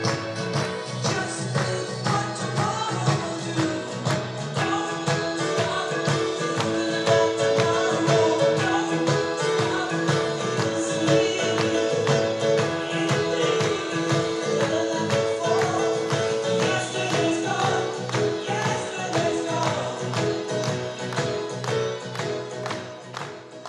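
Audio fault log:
Nothing to log here, as there's nothing wrong to be heard anywhere in the clip.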